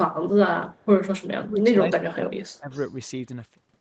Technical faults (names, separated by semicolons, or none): echo leak; speech suppressed in double talk